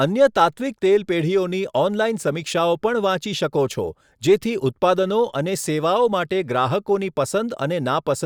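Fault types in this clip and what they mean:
No technical faults can be heard anywhere in this speech recording. Nothing in it calls for a fault entry.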